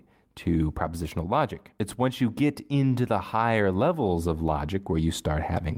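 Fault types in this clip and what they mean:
Nothing stood out on listening to this speech recording.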